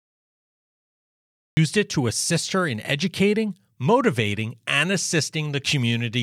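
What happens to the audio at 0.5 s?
At 0.5 s the audio sits inside a cut-off start: capture began late, so everything before 1.57 s is missing and the clip holds only digital silence from 0.0 s up to that point. At 0.5 s there is nothing at all, not even background noise. When the recorded material finally appears at 1.57 s, the speech enters abruptly partway through a sound, with no natural attack or fade-in leading into it.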